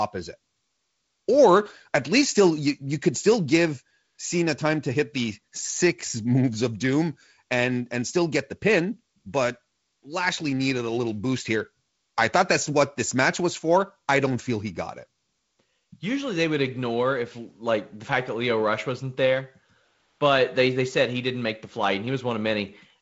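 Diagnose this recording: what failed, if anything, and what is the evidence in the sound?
Nothing failed: the speech shows only the top end stopping near 7.7 kHz and the light upper-band hiss expected of the G.722 wideband telephone coding it passed through, with no fault at any stage of the chain.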